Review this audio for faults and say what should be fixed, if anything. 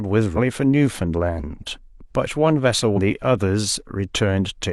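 Damaged data in a compressed stream causes two short disruptions in the speech, at 0.33–0.38 s and 2.93–2.99 s. Corrupted bytes there make the decoder misread frames and lose sync until it finds a valid header. Verify transfer integrity with checksums and use error-resilient framing or retransmission.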